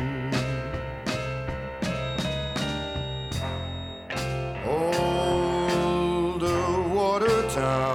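From 1.93 to 4.12 s, a feedback whistle appears, likely from a loudspeaker-to-microphone loop held right at the edge of feedback. A single tone near 3.8 kHz rings on, well below the main sound, as a thin whistle that swells and fades slowly.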